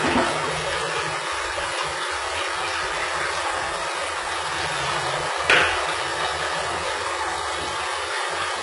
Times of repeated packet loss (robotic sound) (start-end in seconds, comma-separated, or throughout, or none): none